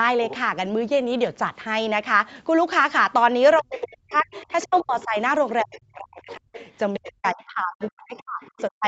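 An echo canceller that likely failed to remove the far end's loudspeaker sound lets the other side's voice leak through, first as a brief scrap from 0.24 to 0.36 s, roughly 15 dB under the talker, then continuously from 3.55 s to the end, somewhat fainter at around 20 dB below.

From 3.6 to 8.85 s the speech is suppressed in double talk, likely because the canceller could not separate the talker from the echo. The talker's voice dips repeatedly, for about three seconds in total, sinking by as much as some 40 dB.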